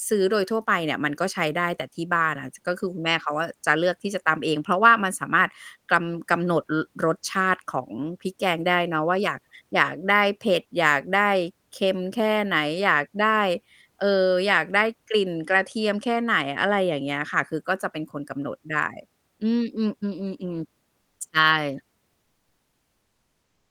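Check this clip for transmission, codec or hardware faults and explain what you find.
One fault is audible, near the end. From 21.01 to 21.19 s, the faint background (about 51 dB below the loudest speech) turns into a flat, featureless hiss about 2 dB quieter for 180 ms. This is comfort noise in place of the background, likely from discontinuous transmission: the sender goes quiet during silence, and the receiver fills the gap with synthetic noise, consistent with Opus DTX.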